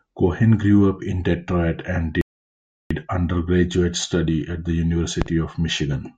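At 2.21 s the speech halts in a rebuffering stall: playback drained the downloaded audio and waited for more data, so silence holds until 2.91 s, adding about 0.69 s. The speech then picks up exactly where it stopped, with nothing skipped. On a waveform this looks like a flat, silent gap between two clean edges; a spectrogram shows a blank vertical band cutting across every frequency.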